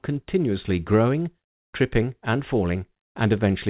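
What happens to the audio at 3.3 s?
Nothing goes wrong at 3.3 s: the speech passes through intact, carried over the WebRTC call path with the band-limited sound of G.711 mu-law, which leaves nothing above 4 kHz.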